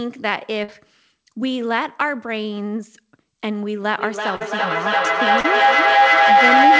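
At 0.64, 4.36 and 5.40 s, short concealed packet loss fills about 40 ms gaps with stretched-out sound, a brief smear rather than a silent dropout. From 3.98 s to the end, a feedback howl, a mic-to-speaker loop, builds near 700 Hz to about 10 dB above the speech, pulsing roughly every 0.3 s. It keeps growing instead of decaying like an echo.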